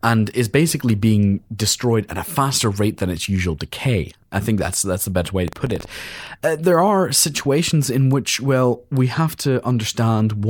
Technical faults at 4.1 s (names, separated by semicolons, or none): none